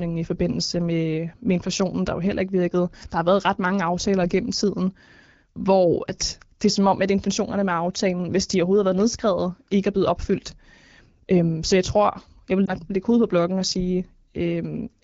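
At 12.66 to 12.73 s, just after "jeg tror jeg vil", one lost AMR speech frame failed its check, so the AMR-WB decoder filled about 20 ms with repeated settings, leaving a brief dip or warble.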